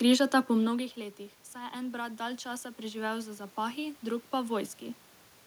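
After "po mnogih letih", from 1.52 to 4.78 s, automatic gain rising follows a drop of about 17 dB at the input: the control slowly adds about 8 dB, so speech and room noise swell together, unlike the talker's own level shifts near 0.5 and 5 s.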